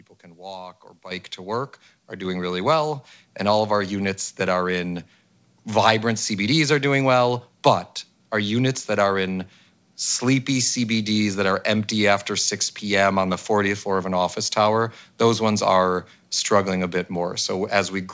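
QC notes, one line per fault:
1.11 s and 2.25 s, microphone volume stepped up: input gain jumps about 10 dB, then about 4 dB more, lifting voice and room noise together.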